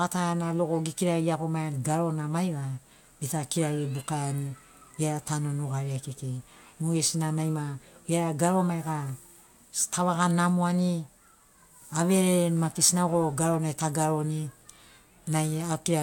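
No technical faults can be heard anywhere in the recording; the speech signal stays intact and continuous throughout.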